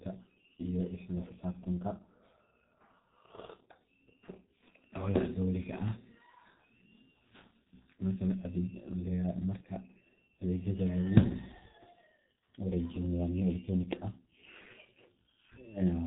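Speech heavily degraded throughout by the G.723.1 codec at 6.3 kbit/s: nothing above 4 kHz survives, and its slow 30 ms frame updates leave a hoarse, smeared quality, unlike a simple low-pass muffle.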